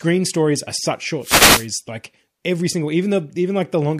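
Just after "stories are such", from 1.21 to 1.68 s, a wireless microphone noise hit washes over the speech: the analogue FM radio link fades, receiver noise surges as a swish of static. Unlike a digital dropout, the sound isn't silenced but overlaid with noise.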